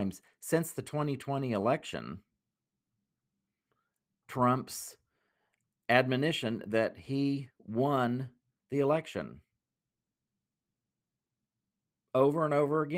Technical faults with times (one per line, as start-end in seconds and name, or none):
none